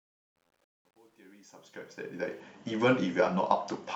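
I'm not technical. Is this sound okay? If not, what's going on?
No. The opening 2.4 seconds fade in with truncation distortion on a fade. At low volume too little detail survives, so the speech sounds gritty, worst from 0 to 1.87 seconds. Unlike steady hiss, the grit fades away as the level rises.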